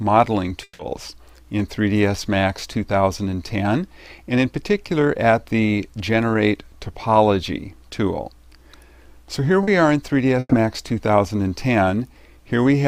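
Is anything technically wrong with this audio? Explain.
Yes, there are three network-related faults.

From 0.63 to 0.82 s there is a long network dropout, likely from the stream stalling. The last sound is stretched into a fading buzz or hiss for about 160 ms, then about 20 ms of silence, and the audio returns with that stretch gone. The silent tail after the fill sets it apart from briefer concealment.

From 9.63 to 9.70 s, short concealed packet loss leaves a 40 ms smear. The receiver continues the previous sound to cover the missing audio and then blends back in. It is too brief to fade or fall silent, which separates it from a burst.

From 10.39 to 10.54 s a burst of packet loss removes about 120 ms. The receiver holds the last sound and turns it down across the gap, leaving a decaying buzz or hiss, then about 20 ms of silence before the audio resumes further on. It is longer than the 9.63 s smear but recovers faster than the dropout.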